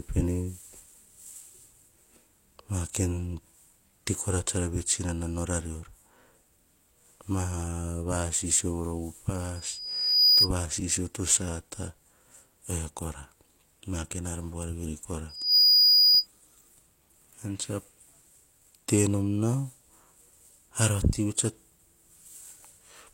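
At 9.55 s a loudspeaker feedback squeal rises out of the speech, a pure tone near 4.9 kHz that swells over most of a second until it sits roughly 10 dB above the speech, then stops at 10.50 s just before "va sisio to sata". The microphone is hearing its own loudspeaker, and at that frequency the loop gain passes unity. The same 4.9 kHz squeal returns right after "ar buar veri kora", from 15.29 to 16.27 s, building faster this time.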